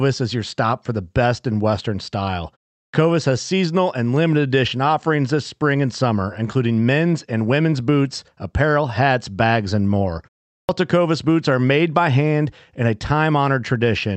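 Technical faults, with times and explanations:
2.83 s and 10.59 s, clipped start after a pause: after gaps of 0.35 and 0.39 s the output device seems to doze off and wake late, eating about 100 ms of each onset, just before "has seasonal and limited" and after "hats bags and more", so the sound snaps in abruptly.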